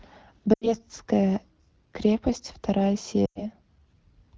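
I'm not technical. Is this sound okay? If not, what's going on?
No. There are two short stretches of lost AMR speech frames, at 0.53 to 0.74 s and at 3.25 to 3.42 s. Radio errors spoiled small chunks of the call's HD Voice audio, so the phone guessed by repeating the last good sound more and more quietly. You hear the speech quickly drop to near silence, each gap about a tenth of a second, then return weak or rough for a moment.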